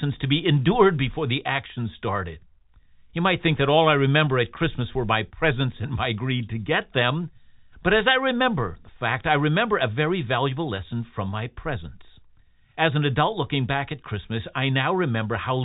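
No technical faults are present; the speech is carried by G.711 mu-law telephone coding at 64 kbps, which holds it to the telephone band below 4 kHz and adds at most a faint quantisation noise that follows the level of the speech.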